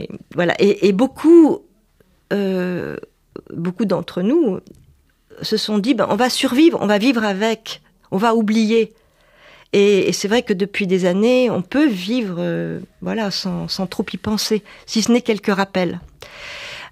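Nothing in the recording stood out as a technical problem on listening.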